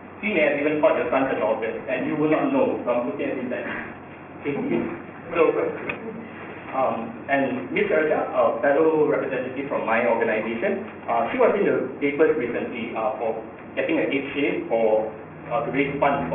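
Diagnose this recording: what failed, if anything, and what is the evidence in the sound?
The sample-rate conversion stage skipped its anti-aliasing filter when reducing the rate, which points to a drop from 44.1 kHz to about 6 kHz. Everything above the 3 kHz fold reflects back as aliasing throughout: gritty, metallic false tones roughly 15 dB below the signal, with the spectrum running hard to 3 kHz.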